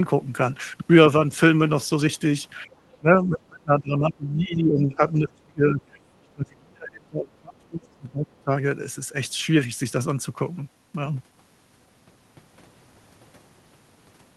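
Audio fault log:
2.66–4.97 s, 5.14–5.97 s, 6.19–8.51 s, speech suppressed in double talk: the speech sinks and breaks up, by about 20 dB at first and about 30 dB later. The likely cause is an echo canceller that confused overlapping near-end talk with echo and attenuated both.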